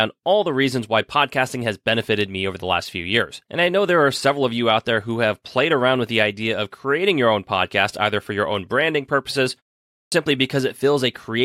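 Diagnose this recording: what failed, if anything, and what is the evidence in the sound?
Playback stage fault: a clipped start after a pause. After "your own branding purposes", a 0.37 s pause precedes it. At 9.9 s the next phrase begins abruptly, its opening missing until 10.12 s. About 220 ms is lost. The output device slept during silence and woke late.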